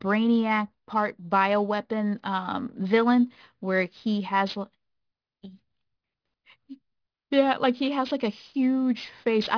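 Aliasing runs through the whole speech clip. The sound points to a downsample from 48 kHz to about 11 kHz with no anti-aliasing filter first, so everything above the 5.5 kHz folding point mirrors back down into the audible band as false, unrelated tones, sitting about 25 dB under the speech. Sibilants come out gritty and metallic. Plain band-limiting would only sound dull and muffled, but here the energy stays dense right up to 5.5 kHz.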